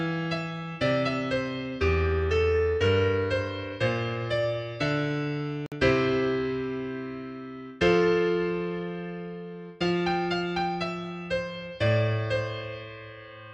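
At 5.66 s the audio cuts to silence for about 56 ms, back by 5.72 s, with the sound resuming as if it kept playing underneath. That's likely a Bluetooth dropout, a handful of late packets (roughly four) discarded before reaching the headphones.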